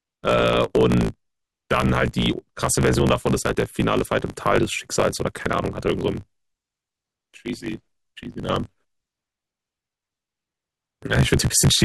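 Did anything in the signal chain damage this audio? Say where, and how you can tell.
Yes, and it's at the driver or buffer stage: a block size mismatch (truncated) running through the whole clip. The speech is steadily buzzing at about 54.4 Hz and moves 1.16 times too fast, yet the timbre stays the same. That's one stage handing over longer blocks than the next one reads, with each block's tail chopped off. The buzz rate fits a 1024-sample write, and the speed-up matches the ratio of the two sizes.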